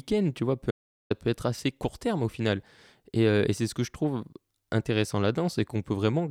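At 0.71 s, just after "tu vois peu", an audio dropout to silence cuts the speech to silence for about 0.40 s, likely a lost input link, resuming at "peut être assez court".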